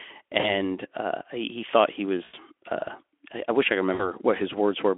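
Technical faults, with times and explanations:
0.39–0.53 s, 2.23–2.34 s, 3.93–4.09 s: VoIP packet loss concealed by the speech codec. Gaps of 40, 100 and 60 ms are filled by extrapolating the last pitch and filter, giving a fading buzzy smear before the sound recovers.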